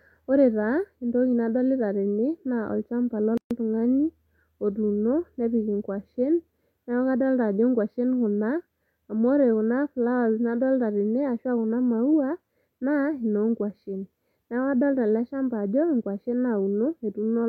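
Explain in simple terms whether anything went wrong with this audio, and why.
At 3.38 s the speech drops into a 133 ms hole of silence, then resumes at 3.51 s right where it left off. That's a gap at a join of encoded pieces: two separately encoded chunks were stuck together with their leftover padding still in.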